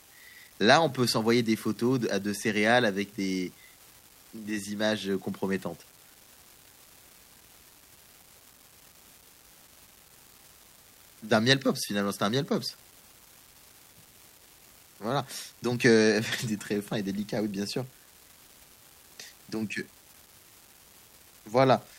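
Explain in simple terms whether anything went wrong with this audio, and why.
Something went wrong: an unreliable data bit runs through the whole clip. One line carrying the digital audio is faulty, so that bit flips at random, adding identical small clicks. Together they make a constant fizzy crackle, audible even in the pauses between speech.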